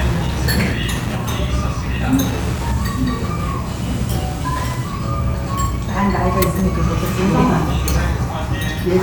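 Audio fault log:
Throughout: Wi-Fi interference, a steady tick every 102.4 ms from rectified beacon bursts, sitting roughly 20 dB below the sound.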